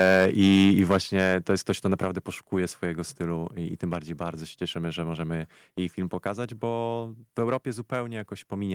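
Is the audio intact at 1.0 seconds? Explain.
No. Microphone overload runs from 0.00 to 2.04 s, ending just before "poszukuje swojego". Peaks exceed full scale by about 7 dB, so a few percent of samples have their tops flattened, giving the loudest syllables a harsh, crackling edge. The likely cause is excessive microphone input gain. At 1.02 s the microphone volume steps down: the level drops abruptly by about 5 dB, likely from the call software reducing the device's input gain once it detected the clipping.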